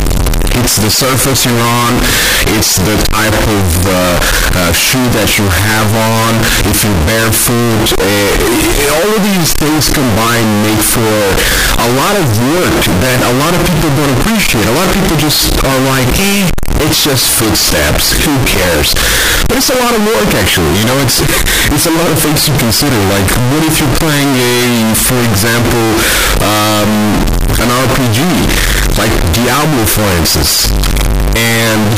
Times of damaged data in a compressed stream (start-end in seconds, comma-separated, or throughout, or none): none